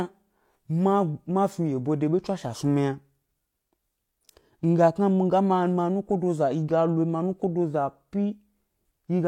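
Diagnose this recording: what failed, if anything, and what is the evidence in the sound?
Nothing failed; no fault is audible anywhere in it.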